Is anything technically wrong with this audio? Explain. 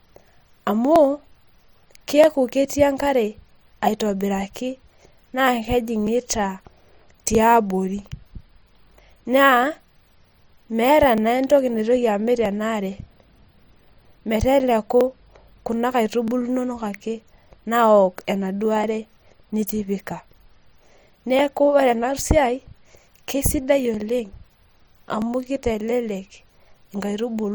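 Yes. Clock drift buffer slips run from 0.96 s to 26.50 s: about twenty sharp clicks, spaced every 1.28 s, cut through the speech. The likely cause is two devices on independent clocks that disagree by roughly a tenth of a percent. The buffer between them gradually over- or under-runs until a short block of a few dozen samples is dropped or repeated, and each slip is heard as a click.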